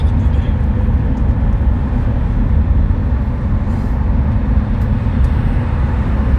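Nothing stood out on listening to this recording of sounds.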